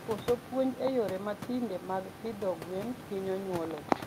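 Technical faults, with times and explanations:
No technical faults can be heard in the recording. The room's background noise sits about 12 dB below the speech and belongs to the recording space, not the system.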